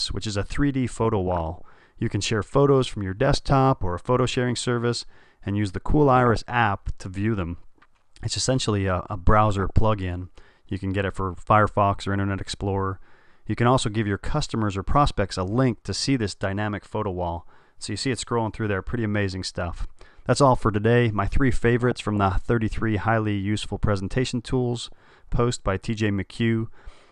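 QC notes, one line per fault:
1.04–1.72 s, 3.25–3.52 s, 6.06–6.50 s, 9.50–9.70 s, 21.81–22.32 s, 24.86–25.19 s: DAB burbling, bursts of burbling blips riding over the sound. Residual bit errors, at a fraction of a percent, slip past error correction into the MP2 data. Corrupted samples put short blips of noise in single sub-bands, and corrupted scale factors make sub-bands leap in level for up to a frame, producing those short gurgling blips.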